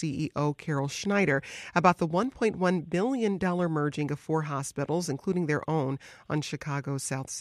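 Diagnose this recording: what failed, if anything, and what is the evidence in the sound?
Nothing in this speech recording points to a failure at any stage of the chain. No event in the sound calls for a diagnosis, so there is no evidence to cite.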